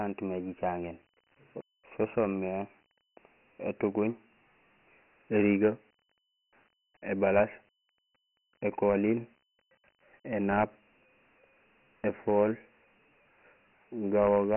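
Throughout, the speech was stored as Dialogic VOX ADPCM, which fits a 4-bit, 6,000-sample-per-second stream: nothing survives above 3 kHz, and heavy gritty hiss tracks the speech.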